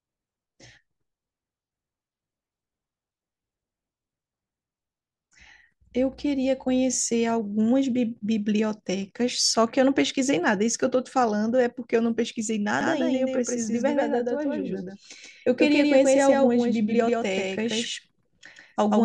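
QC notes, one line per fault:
12.81 s to end: doubled audio track, a full-band copy about 150 ms behind at near-equal level with no decay, starting abruptly, likely from a second, slower capture path.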